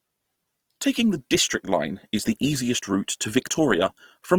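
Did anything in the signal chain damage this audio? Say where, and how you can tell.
Yes, at the codec stage, throughout the speech: Opus compression, likely in its CELT music mode, consistent with a rate near 24 kbps. Bandwidth still reaches 20.4 kHz, but starved bands are refilled with folded or noise content, leaving tones rough and grainy.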